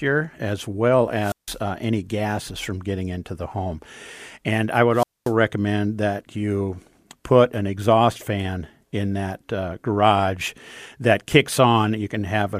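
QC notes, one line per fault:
1.18–1.60 s and 4.92–5.33 s, wireless microphone squelch dropout: The speech cuts out twice, the first time just after "as well" and resuming at "uh any gases from". Each dropout starts with a brief swell of hiss as the analogue FM radio link weakens. The receiver's squelch then mutes the output completely for about 0.16 s the first time and 0.23 s the second, leaving a hole of near silence before the signal recovers and speech returns.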